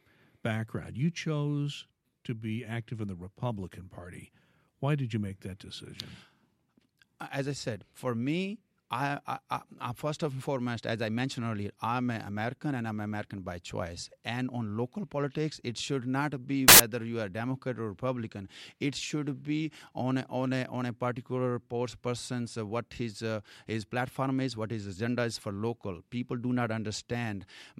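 At 16.68 s, samples built from the wrong bytes cut into the speech for about 0.11 s, until 16.80 s. The bytes of each sample were joined wrongly, so fast-changing low bits became the loud part. It sounds like a burst of harsh broadband noise.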